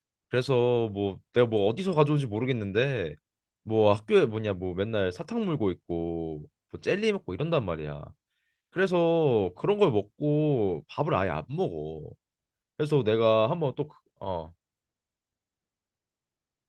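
No technical faults are audible anywhere in the speech.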